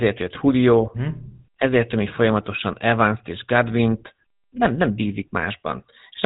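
GSM full-rate codec coding runs throughout the speech. It models the vocal tract and drives it with sparse, regularly spaced excitation pulses at a bitrate that fits 13 kbps. Nothing above 4 kHz survives, so voices sound muffled, buzzy and plainly gravelly.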